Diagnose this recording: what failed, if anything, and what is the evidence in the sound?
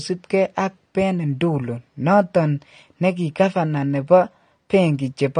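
The codec stage shows AAC compression throughout the speech: nothing above 9.7 kHz, with plainly audible coding damage leaving it dull and smeared. Unlike a simple low-pass filter, the band below is coarsely quantised too, which likely points to AAC-LC at about 32 kbps.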